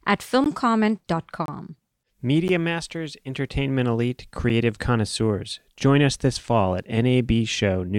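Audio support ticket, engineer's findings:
Gap between stream segments: short hard-edged dropouts to silence in the speech at 0.44, 1.46–1.48, 2.48, 3.49 and 4.49 s, lasting about 16, 25, 10, 5 and 7 ms. One-second spacing fits 1 s segment boundaries. Probable component: segmenter or packager timestamps. Each segment starts slightly after the previous one ends, and the player pads the hole with silence. No audio content lost, only time inserted.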